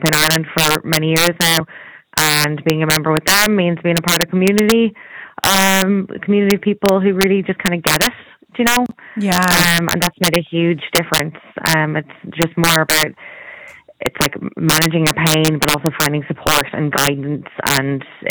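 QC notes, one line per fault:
Throughout: integer overflow, loud peaks pushed about 8 dB past full scale wrap to the opposite sign, around one percent of samples, producing sharp violent cracks.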